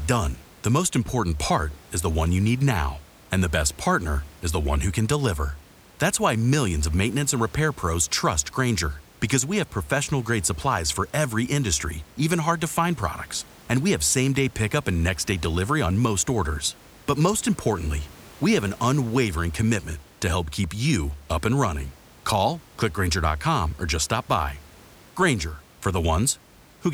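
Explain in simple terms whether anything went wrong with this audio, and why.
Nothing went wrong with this speech recording: the faint background noise of the room sits well beneath the speech and is simply part of where it was recorded.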